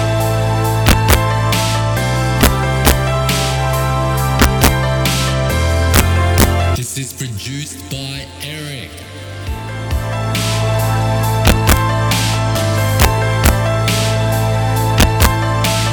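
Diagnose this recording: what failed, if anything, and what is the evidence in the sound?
Integer overflow at the sample-format or gain stage: loudest peaks, only a small fraction of samples, wrap to opposite sign throughout, cracking far harsher than clipping's flattened tops, despite only about 2 dB overdrive.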